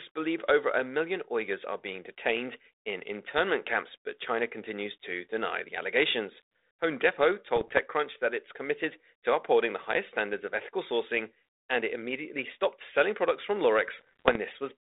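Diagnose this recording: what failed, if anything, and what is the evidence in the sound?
Bit errors on an ADPCM link, in the transmission stage: pops and rough bursts with brief level jumps at 7.56–7.80 s, before "that it's committed to", and 13.99–14.36 s, after "stopped selling products from". Flipped bits upset the decoder's step size and predictor, so damage rings on instead of dropping out as packet loss would.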